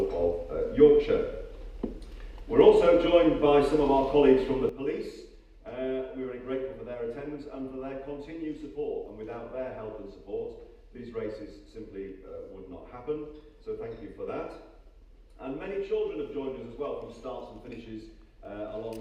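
The audio has a sudden gain jump at 4.69 s. The level drops by about 12 dB in one step and stays down to the end. The background noise falls by the same amount at the same moment. The likely cause is a digital gain change applied without a ramp.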